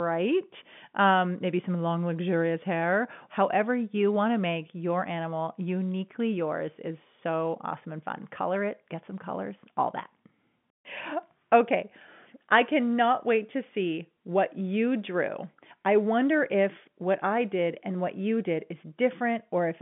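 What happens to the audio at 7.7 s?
Nothing goes wrong at 7.7 s: the speech carries on intact through that moment, with the same narrow telephone-band sound of G.711 coding that runs through the whole clip and nothing above about 3.7 kHz.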